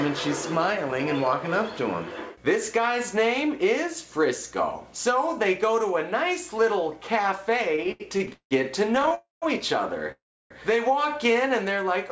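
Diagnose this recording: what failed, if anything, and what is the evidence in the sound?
Repeated stalls (stutter) sit at the network and jitter-buffer stage. From 7.76 to 8.53 s the sound catches seven times, with about 328 ms of held-over sound and the longest hold at 179 ms, so roughly 43% of that stretch is concealment. A second burst from 8.95 to 9.13 s has five brief catches, none longer than 19 ms. Packets were arriving more slowly than playback, so the buffer kept emptying. The receiver extended the last sound each time, so nothing is lost but the flow drags.

A call audio freeze follows at 9.15 to 9.44 s and again at 10.12 to 10.52 s. In each, the sound carries on as a fading continuation and then drops to silence, about 160 ms in the first and about 320 ms in the second. It then resumes where it left off, adding 272 ms and 387 ms of delay. The likely cause is packets held up in transit until the jitter buffer ran dry. 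The top end stops at 8 kHz throughout, consistent with a G.722 call path at 64 kbps.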